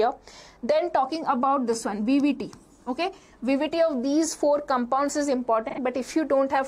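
AAC frame loss with concealment occurs from 5.69 to 5.79 s, a gap of about 85 ms that fits two consecutive lost frames. With no data arriving for that stretch, the decoder rebuilt the missing audio from the last spectrum it had received, keeping its energy while reshuffling its fine detail. Because the loss is short, the result is a brief smeared, noisy or phasey patch rather than a dropout to silence.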